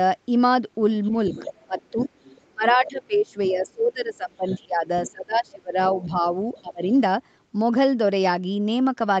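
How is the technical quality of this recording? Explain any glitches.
The recording has two related call-audio faults: a second voice bleeding in underneath the main talker, and the main talker being pushed down while that second voice is present.

Other side's voice leaking through appears three times: 1.04 to 2.9 s, 4.48 to 5.11 s, and 6.01 to 6.61 s. A fainter, separate voice sits under the speech. It is about 15 dB below the talker in the first stretch, about 20 dB in the second, and about 30 dB in the third. The likely cause is the far end's audio leaving the talker's loudspeaker, returning through the microphone, and surviving the echo canceller. Unlike room reverberation, it is a different voice with its own timing, not a smeared tail of the talker's own words.

Speech suppressed in double talk runs across 1.63 to 6.83 s and overlaps the leaked passages. The talker's level sags and parts of the voice drop away in pieces, falling by as much as about 25 dB and adding up to roughly three seconds of ducked sound. 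This is likely the canceller, faced with both voices at once, attenuating everything rather than separating them. Unlike a network dropout, the gaps follow the other voice's activity and leave no clicks or robotic repeats.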